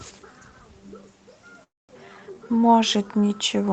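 From 1.63 to 1.98 s, a long network dropout, likely: the last sound smears into a fading buzz or hiss, then silence, and about 0.18 s is lost.

From 2.05 to 3.42 s, a jitter buffer slow-down repeats pitch periods, adding 170 ms; the speech runs at 88% speed, drawn out, same pitch.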